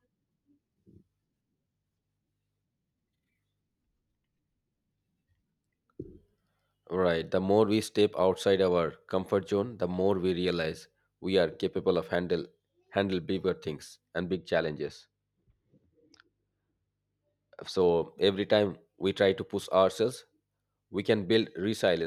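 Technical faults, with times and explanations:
14.29–17.81 s, de-emphasis applied wrongly: right after "handle bigger things and", the speech turns dull and muffled until "every time we try". A treble-cut filter of the kind meant to undo pre-emphasis has been applied where no matching boost existed to cancel. The response therefore slopes down smoothly toward the high frequencies, reaching about 11 dB below the 1 kHz level at 10 kHz, which strips consonant crispness and air.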